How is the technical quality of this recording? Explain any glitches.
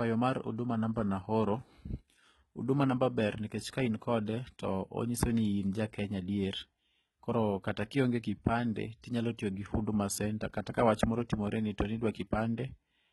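The recording is heavily compressed throughout, with damage typical of HE-AAC compression. The speech has no content above 11.8 kHz, and the treble that remains sounds synthetic: sibilants come out gritty and lisping, with a metallic sheen. This is likely spectral band replication, where the encoder transmits only the lower spectrum and rebuilds the upper bands by copying lower ones upward, so their harmonics don't align. The heavy damage fits a bitrate around 16 kbps.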